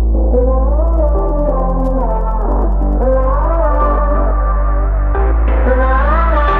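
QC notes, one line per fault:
0.84–3.90 s, Wi-Fi interference: faint, steady ticking about ten times a second, well below the music. A nearby radio's 102.4 ms beacon is being rectified.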